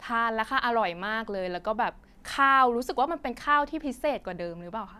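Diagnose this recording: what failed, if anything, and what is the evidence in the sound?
Nothing in this speech recording points to a failure at any stage, so there's no fault to diagnose.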